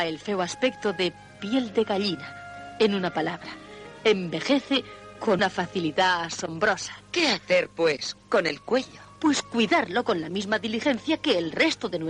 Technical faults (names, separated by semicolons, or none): damaged data in a compressed stream